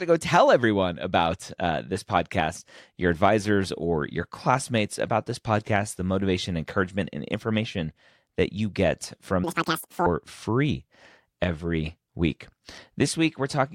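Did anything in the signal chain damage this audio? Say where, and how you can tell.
Yes. Right after "that you get from", from 9.44 to 10.06 s, the speech jumps to double speed and a full octave (12 semitones) up before settling back at "free every." That's a sample-format conversion fault, with audio read two samples at a time. The reader treated each pair of samples as one frame, as if the stream were stereo or twice as wide, so it raced through the data at 2x.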